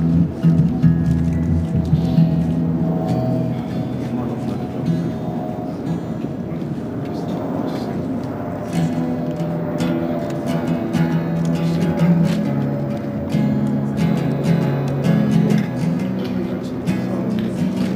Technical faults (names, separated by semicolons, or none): crude rate conversion